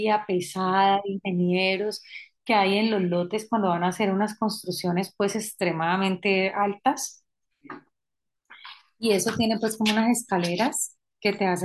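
Nothing stood out on listening to this speech recording.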